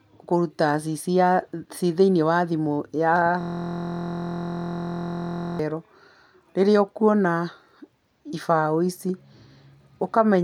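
From 3.41 to 5.59 s a system hang loop occurs: the driver stalled while the audio hardware kept replaying one 23.22 ms slice, which fits a 1024-sample buffer. Repeated nearly a hundred times, it becomes a steady buzz at 43.1 Hz.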